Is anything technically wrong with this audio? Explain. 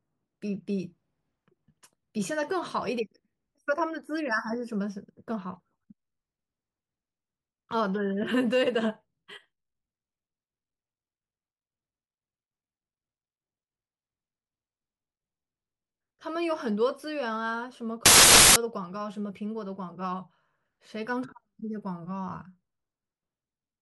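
Yes. From 18.06 to 18.56 s the speech turns into loud, harsh broadband noise: samples built from the wrong bytes. The reader misassembles each sample's bytes, so the rapidly changing low-order bits land in the high-order positions during the half-second burst.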